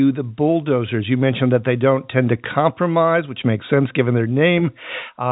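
No technical faults occur at any point in the speech, which comes over an ordinary G.711 telephone channel with nothing above 3.8 kHz.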